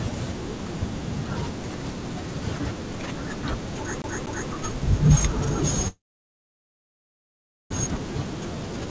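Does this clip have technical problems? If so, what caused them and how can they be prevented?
Yes, there are two faults in this speech clip.

From 4.02 to 4.50 s there is a CD stuck on one turn. The same 240 ms slice of audio plays twice, with a short mute at each jump back. It sounds like a fast, even stutter. A scratch or smudge on the disc makes the laser lose its place. It then jumps back one track on each turn. Cleaning the disc, or ripping it with an error-correcting ripper, would prevent this.

From 5.88 to 7.72 s there is a call audio freeze. The sound stops and is stretched into a brief fading buzz. Then about 1.7 s of near silence follows. The speech resumes where it stopped, so nothing is lost. Everything after it arrives about 1.8 s late. The likely cause is packets held up on the network, which drained the jitter buffer. The call ran through G.722, which leaves nothing above 8 kHz. 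A more stable connection, such as wired instead of congested Wi-Fi, would prevent this.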